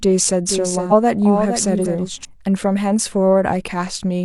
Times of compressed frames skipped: 0.87-0.92, 1.81-1.86

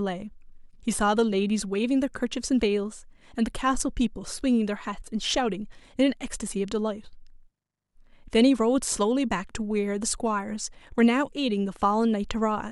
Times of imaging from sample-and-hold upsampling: none

